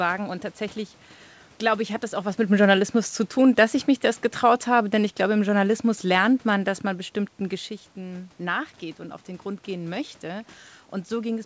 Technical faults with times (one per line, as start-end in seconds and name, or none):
4.43-6.73 automatic gain falling